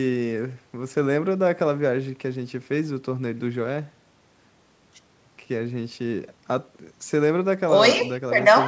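No technical faults are present in the speech, which carries the band limit of a call path, with the lowest bass trimmed by the microphone processing's high-pass filter and nothing above 8 kHz, as expected from a wideband call codec.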